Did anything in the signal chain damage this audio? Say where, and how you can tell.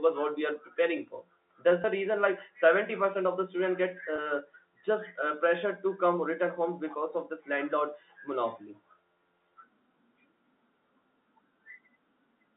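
Yes: packet loss with pitch repetition at the network stage, from 1.82 to 1.84 s, just before "reason like seventy percent", and from 4.16 to 4.18 s, just after "of the student get". Each gap of about 20 ms, consistent with one dropped packet, is bridged by a briefly held, buzzy repeat of the last pitch period. The band-limited telephone sound of the G.711 line is separate from these gaps.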